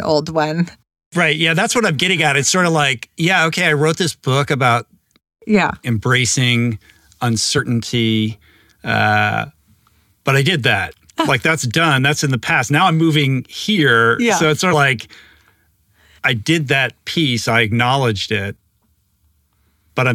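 Compressed frames skipped at 14.70 to 14.74 s in the speech: a short run of encoded frames never reaches the output, either missing from the stream or rejected by the decoder as corrupt, so playback leaps forward by roughly 70 ms of audio. The result is a small piece of the speech simply absent.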